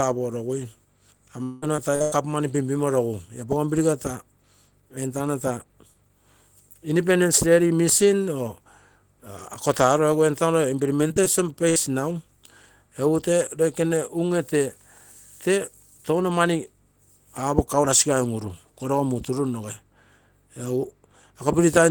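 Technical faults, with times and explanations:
1.43–2.14 s and 10.96–11.27 s, repeated packet loss (robotic sound): four gaps in each stretch. The receiver patches each one by extending the preceding sound, so the audio turns choppy with pieces missing. About half of the first stretch is filled in, with one gap lasting 186 ms. About a quarter of the second stretch is filled in, with no gap longer than 21 ms.
11.69–11.78 s, burst of packet loss: about 60 ms of audio goes missing in one run. The last sound is stretched across the hole and faded down, giving a brief held buzz or hiss. The audio then picks up further on, with that piece gone.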